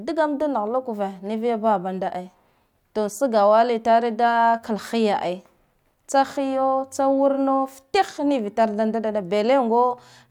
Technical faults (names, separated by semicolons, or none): none